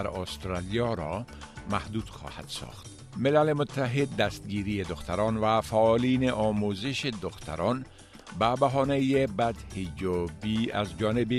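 No technical faults can be heard anywhere in the audio. Nothing in the recording breaks, drops out or changes unexpectedly at any point.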